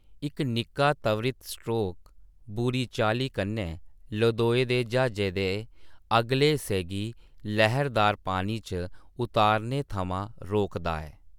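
No technical faults can be heard anywhere in this speech recording. Nothing in the audio points to a problem with how it was captured, processed or delivered.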